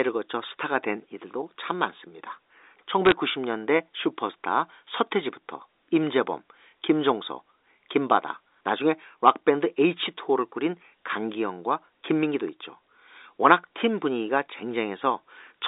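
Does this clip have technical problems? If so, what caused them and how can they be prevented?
Yes. From 3.06 to 3.12 s, bit errors on a digital phone line add brief crackle over the speech. Flipped bits corrupt single samples, and a hit on a high bit or on the sign of a loud sample produces a sharp tick. Error checking and correction on the line, or a cleaner digital link, would prevent it.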